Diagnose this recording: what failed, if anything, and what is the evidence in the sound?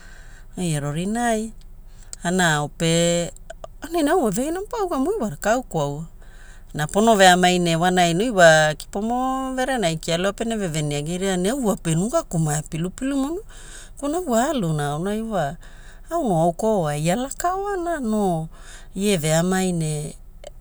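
No fault found in this recording.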